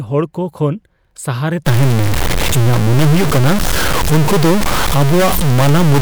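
A stuck bit sets in at 1.67 s and runs to the end of the clip. From that point the speech turns harsh and buzzy, and the gaps between phrases fill with a loud, gritty noise instead of going quiet. The likely cause is one data bit held at a fixed value by a failed line or converter, so about half the samples jump by a step near -10 dBFS. That is a high bit, which is why the noise in the pauses is so prominent.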